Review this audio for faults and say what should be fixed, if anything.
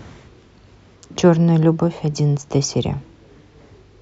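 No faults turn up in this audio, so nothing needs to be fixed.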